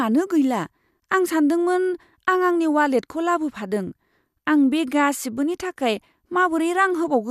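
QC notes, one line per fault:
No faults heard anywhere in this speech recording.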